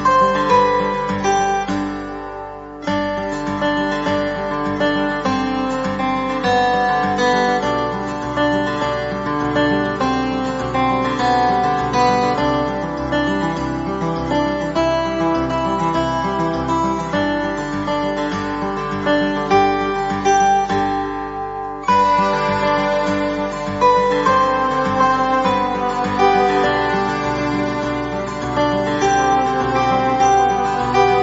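No technical faults can be heard anywhere in the audio, and the signal stays steady and intact throughout.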